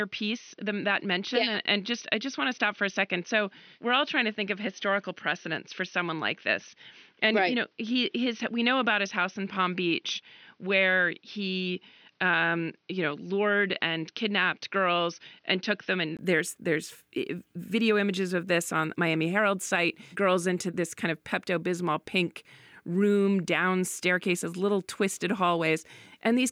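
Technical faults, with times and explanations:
0.0–16.19 s, input switched to a poorer device: for the first 16 seconds or so the speech sounds dull and a bit boxy, with nothing above about 6.2 kHz. At 16.19 s there's a brief dropout of about 20 ms, then the full top end comes back while the level stays about the same. That pattern most likely means the recording started on a narrower-band input and then moved to the proper microphone. The earlier input's own background noise sits well down, roughly 50 dB under the speech.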